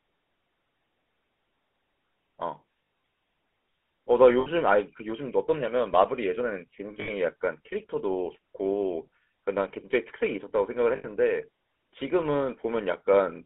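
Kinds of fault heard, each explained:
GSM full-rate codec: buzzy, gravelly speech confined to about 250 Hz–3.5 kHz, which fits 13 kbps pulse-excited coding; unlike simple band-limiting, it adds roughness.
lost GSM frames: brief metallic rings at 2.84, 4.4, 7.0 and 10.96 s, with the last good frame replayed; unlike dropouts, sound lingers rather than vanishing.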